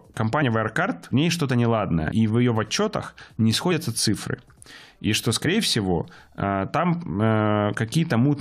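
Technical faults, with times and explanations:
0.41 s, 2.10 s, 3.70–3.72 s and 5.45 s, compressed frames skipped: the speech lurches forward with a short smeared blip at each point, losing roughly 50 ms each time except at 2.10 s, where about 100 ms vanishes. Whole blocks of encoded audio were never decoded. The gap sizes fit a couple of frames, or about four at 2.10 s, of roughly 23 ms each. Overlapping frames blur each join into a blip instead of a hard click.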